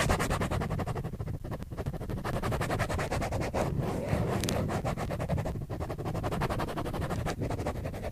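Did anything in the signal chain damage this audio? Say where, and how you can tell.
Yes, in disc playback: CD scratch ticks at 0.45 to 2.80 s and 4.11 to 6.23 s. They are spaced evenly, once per revolution, unlike random clicks, where concealment covers unreadable data.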